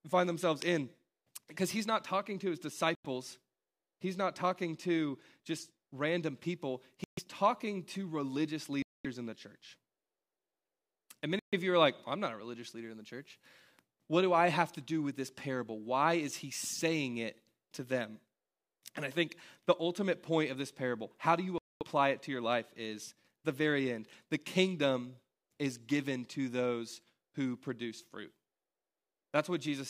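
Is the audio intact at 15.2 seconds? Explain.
Yes, the speech at 15.2 seconds plays through intact, with no audible fault at that moment.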